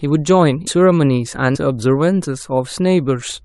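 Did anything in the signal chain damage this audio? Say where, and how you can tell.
Yes. Compressed frames were skipped at the codec stage during decoding. The speech jumps forward abruptly at 0.66 s and again from 1.54 to 1.57 s. Each jump loses about half a second of audio, a bit less the second time. That is roughly twenty frames each. The frame length is 23.2 ms, which fits a 1024-sample frame at 44.1 kHz. The frames were missing or rejected as damaged.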